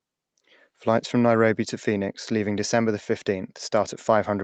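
No faults can be heard in this speech, which sounds like it has passed through a call's microphone processing and an Opus-coded call path at a moderate bitrate, with nothing audible above about 8 kHz.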